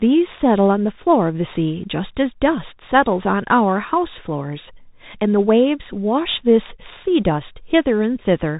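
Throughout the speech, a Bluetooth CVSD headset codec sends each sample as one up-or-down step, which fits a 64 kbps link. Nothing passes above 4 kHz, s sounds turn scratchy, and a granular hiss sits underneath, unlike the cleaner, wider-band mSBC.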